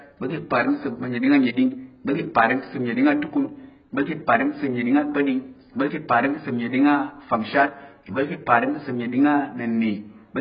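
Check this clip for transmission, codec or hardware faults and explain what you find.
One codec fault is present. Heavy AAC compression throughout, likely AAC-LC near 12 kbps: a lowered cut-off removes everything above 5.2 kHz, giving dull, warbling sound and a flat spectrogram ceiling.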